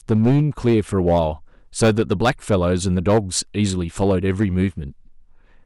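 From start to end of the speech, the louder syllables carry a harsh, gritty crackle. This is hard clipping: the signal was driven about 8 dB past what one stage could pass, so a small fraction of peaks were sliced flat, adding high harmonics.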